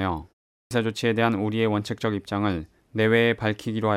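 At 0.55 s, after a 0.3 s pause, the speech resumes with its first 160 ms missing, up to 0.71 s. This clipped start after a pause leaves the sound starting abruptly, as the output device wakes or relocks late. Muted pauses, in contrast, would cost only background, never speech.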